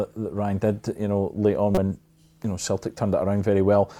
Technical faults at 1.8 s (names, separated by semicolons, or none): damaged data in a compressed stream